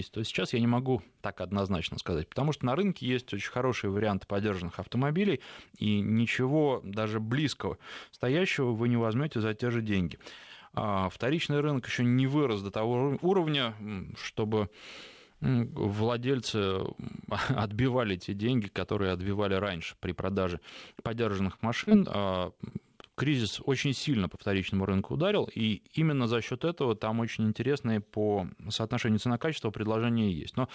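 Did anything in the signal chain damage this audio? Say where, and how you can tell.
Yes. Around 3.98 to 4.02 s the network and jitter buffer stalled on a late packet. The buffer ran dry, and the receiver held the last sound for about 19 ms before resuming where it left off. On a spectrogram the harmonics run flat for a moment, with a slight amplitude dip. Nothing is lost.

Repeated packet loss, heard as robotic sound, runs from 21.56 to 23.39 s, between "раньше при продаже подержанных" and "очень сильно по вторичному". Several gaps, the longest about 36 ms, were patched by extending prior audio. About 140 ms was filled and 60 ms lost. On a spectrogram this shows as smeared, repeated frames with notches. The G.722 call path also cuts everything above 8 kHz.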